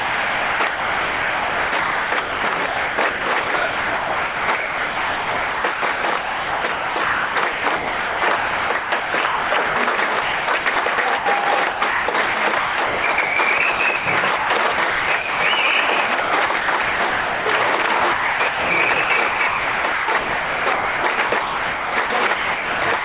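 Sound chopped by the voice detector runs from 0.0 to 14.06 s, 14.36 to 15.4 s, 15.86 to 17.46 s and 17.82 to 23.04 s. The audio cuts in and out, with gaps filled by synthetic hiss, likely from the sender's voice detector switching to comfort noise. Through all of it, nothing is heard above 4 kHz.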